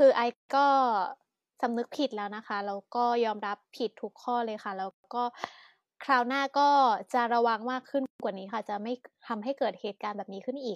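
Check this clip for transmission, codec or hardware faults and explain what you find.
There are three gaps at joins of encoded pieces in the speech: 0.33–0.49 s (0.16 s), 4.91–5.04 s (0.13 s) and 8.06–8.20 s (0.14 s). Each is a sudden silence with smeared edges, after which the speech resumes where it stopped. The pieces were encoded separately and butted together untrimmed, so encoder start-up delay and last-frame padding remain at each seam.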